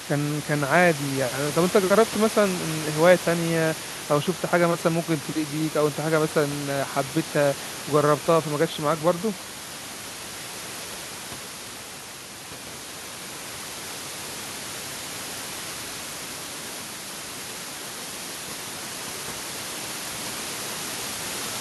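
The speech signal carries no technical faults, with the room's background sound sitting about 11 dB below the voice as part of the recording itself.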